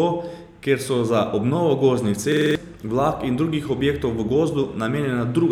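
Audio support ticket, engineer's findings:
System hang loop, 2.32–2.55 s, after "so za obnovo gozdnih": one 46 ms slice repeats five times at 21.5 Hz, a stutter. Driver stall, fitting a 2048-sample ring buffer; about a fifth of a second lost.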